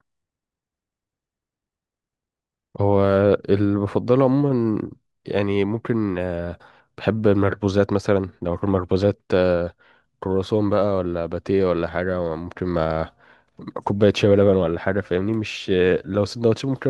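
A speech recording, and nothing in it is technically wrong.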